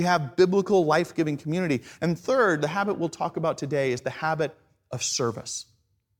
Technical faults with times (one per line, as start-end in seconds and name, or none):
none